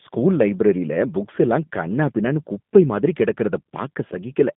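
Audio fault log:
Throughout, G.729 codec: low-bitrate speech coding rebuilds the voice from a filter, pitch predictor and sparse pulses at about 8 kbit/s, leaving speech rough and synthetic, with nothing above 3.7 kHz.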